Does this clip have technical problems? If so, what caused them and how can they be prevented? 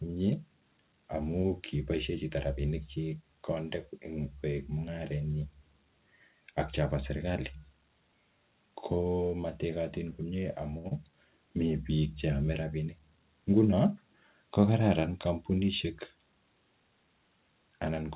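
Yes. This speech clip has three faults.

At 10.78 to 10.86 s there is a short stall from a late packet. One packet arrived late and the jitter buffer ran dry. The receiver held the last sound for 61 ms until the packet came, then carried on from the same point. Nothing is lost, but the sound hangs too long with a faint buzz or dip, and the call picks up 61 ms of extra delay. A larger or adaptive jitter buffer on a steadier network path would prevent this.

Right after, at 10.88 to 10.93 s, comes a short concealed packet loss. About 40 ms of audio never reached the decoder in time. The receiver covered the gap with 28 ms of synthetic continuation, then blended back into real audio. The result is a brief smear or wobble, and a short sound can drop out. Better network quality, or forward error correction and redundancy, would prevent this.

From 13.72 to 14.31 s there is a jitter buffer speed-up. 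The buffer held more audio than it aims for. To shrink the delay, the receiver removed small pitch-period pieces again and again, roughly 70 ms in total. Speech in this stretch runs about 10% fast at unchanged pitch and sounds hurried. Smoother packet delivery and gentler buffer adaptation would prevent this.

The call path limits the sound to below 4 kHz, which points to a narrowband codec such as G.711.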